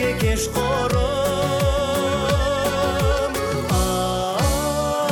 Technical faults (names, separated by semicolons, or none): DAB burbling